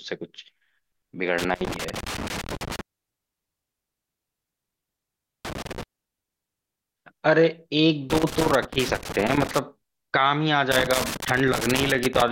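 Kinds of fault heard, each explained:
Loose connector crackle: irregular bursts of scratchy crackle chop through the speech at 1.38 to 2.81 s, 5.45 to 5.83 s, 8.1 to 9.59 s and 10.72 to 12.28 s, as a worn or dirty contact repeatedly makes and breaks while the cable moves.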